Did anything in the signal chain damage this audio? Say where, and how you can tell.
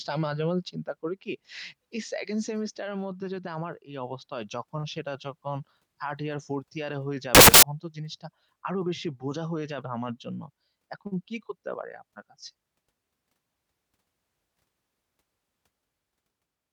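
Yes. Loud, harsh broadband noise swamps the speech from 7.35 to 7.63 s. These are samples built from the wrong bytes at sample-format conversion, which promotes the fast-changing low bits to the large part of each value.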